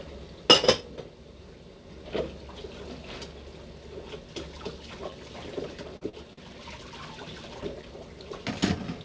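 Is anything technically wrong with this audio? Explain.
Yes. From 5.97 to 6.40 s there is repeated packet loss (robotic sound). Audio packets were lost or arrived late in four short bursts, the longest about 43 ms. Each hole was papered over by extending the preceding sound, so roughly 29% of that stretch is concealment, heard as choppy, robotic stutter with small pieces missing. The call path itself runs through a wideband call codec with nothing above 8 kHz, which fits G.722.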